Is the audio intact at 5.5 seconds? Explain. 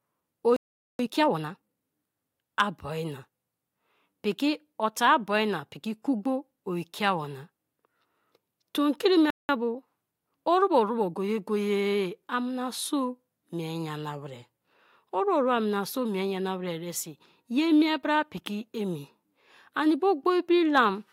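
Yes, at 5.5 seconds the speech plays through intact, with no audible fault at that moment.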